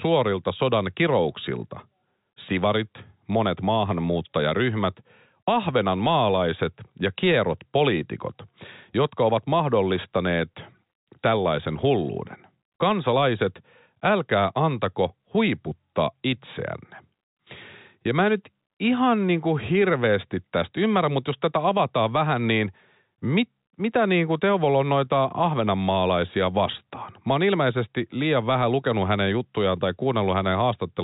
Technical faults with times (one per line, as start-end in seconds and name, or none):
none